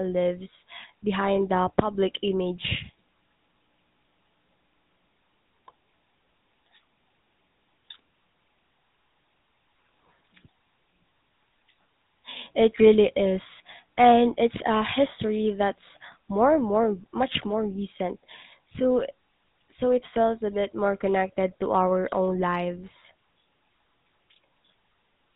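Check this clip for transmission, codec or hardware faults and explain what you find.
One fault runs through the whole speech clip: GSM full-rate codec damage, and it is plainly audible. It is present from start to finish. The codec models the vocal tract as a filter and excites it with a regular pulse train, keeping only every third excitation sample. Nothing above 4 kHz survives. The result is a dull, band-limited sound with a buzzy, gravelly roughness on voiced sounds. The character fits a 13 kbps GSM stream.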